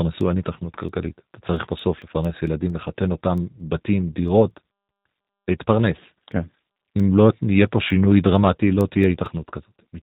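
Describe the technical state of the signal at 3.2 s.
At 3.2 s two things are going on at once. First, the whole clip carries G.729 codec damage, and it's plainly audible here. The speech has been rebuilt from a vocal tract filter, a pitch predictor and a handful of pulses per 10 ms frame, so it comes across a bit rough and synthetic, and nothing gets through above 3.8 kHz. That sound fits an 8 kbit/s G.729A stream.

Second, 3.2 s falls inside a run of word clock ticks that lasts from 0.21 s to 9.94 s. The receiving device is running on its own clock, not locked to the sender's, and the mismatch is roughly 100 ppm. Each time the two clocks slip past each other, one sample is dropped or repeated. You hear that as sharp ticks about every 0.2 s, some forty across the clip, and they aren't all equally loud.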